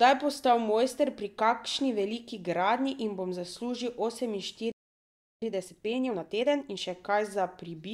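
At 4.72 s the speech cuts out for about 0.70 s, a playback stall, likely from the player's buffer running dry or its thread blocking, before resuming at 5.42 s. From 5.42 s to 6.82 s, time-compressed catch-up hurries the speech at 1.5x while keeping pitch, splicing out short segments.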